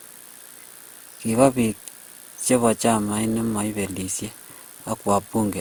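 Across the whole clip the speech sounds swirly, smeared and hollow, with soft, blurred consonant attacks. The cause is likely generation loss: repeated re-encoding, around five passes, with a codec resembling Opus at 64 kbit/s, each pass adding fresh noise.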